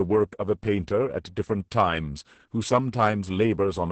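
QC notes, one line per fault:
Throughout: Opus voice compression. The speech is cut off above about 8.6 kHz, the wideband limit of Opus's SILK linear-prediction mode, so sibilants and breath lose their air and the speech sounds muffled. The excitation behind each predicted frame is coded very coarsely, which fits a bitrate around 10 kb/s. That leaves the speech heavily damaged: hoarse, buzzy and slightly robotic, as fine harmonic and noise detail is replaced by a rough approximation.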